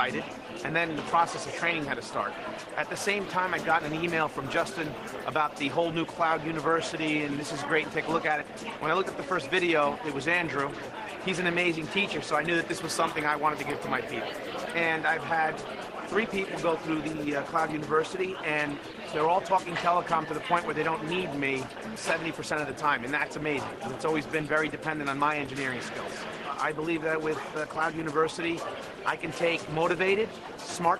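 No technical faults are audible.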